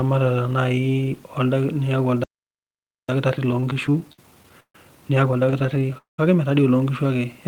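A speech recording whose playback breaks down after two seconds. A playback stall silences it from 2.24 to 3.09 s, about 0.85 s, likely because the player ran out of data or its thread was blocked. From 3.09 to 6.70 s, time-compressed catch-up hurries the speech at 1.25 times speed, keeping normal pitch as the backlog is trimmed. Inside that stretch, repeated stalls (stutter) appear: twelve gaps between 3.51 and 4.75 s, the longest 143 ms, filling about a quarter of the span with continued sound; then six shorter gaps, none over 23 ms, between 5.50 and 5.95 s. Nothing is lost, but the delivery drags because packets kept arriving late and the jitter buffer emptied. A call audio freeze follows from 5.98 to 6.19 s. The last sound is held for about 205 ms and decays, including roughly 140 ms of silence, likely from packets delayed in transit, before speech resumes where it stopped.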